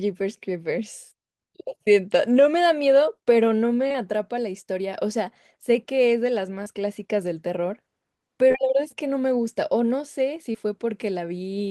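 Short concealed packet loss hits this speech recording at 3.87–3.98 s (with a second overlapping gap at 3.92–3.96 s), 6.64–6.74 s, back-to-back at 8.48–8.52 s and 8.52–8.56 s, and at 10.52–10.56 s. Each time, 20 ms of audio never reached the decoder, which patched it with 15 to 26 ms of extrapolated signal before blending back into the real audio. Around 3.9 s and 6.7 s a few milliseconds of genuine sound were also dropped, and each patched spot comes across as a brief smear or wobble.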